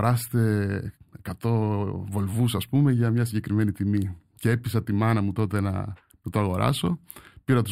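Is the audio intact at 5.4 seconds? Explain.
No. At 5.4 seconds, as throughout the speech, there is channel delay (comb filtering): one channel lags by a few samples, under a tenth of a millisecond, so the mono sum cancels near 7 kHz, sounding hollow or phasey. A spectrogram shows a steady dark horizontal notch band there.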